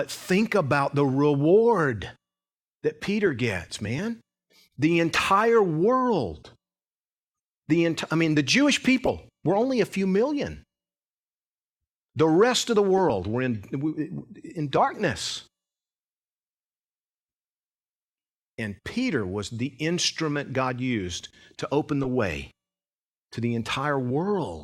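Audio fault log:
3.85 to 3.90 s, 5.11 to 5.20 s, 9.05 to 9.10 s, 12.97 to 13.01 s, 22.03 to 22.07 s: corrupt frame decoded. Brief chirps and noisy blips of 30 to 80 ms, loudest at 5.1 and 9.1 s (about -10 dBFS). Damaged compressed frames were decoded anyway, with misread gains and codes putting energy at wrong frequencies.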